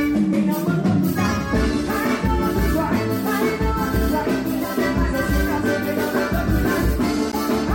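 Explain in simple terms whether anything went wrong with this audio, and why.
Three short glitches at 4.62–4.64 s, 6.16–6.18 s and 7.32–7.37 s come from a corrupt frame decoded: damaged compressed data was played anyway, scattering sound into wrong frequencies.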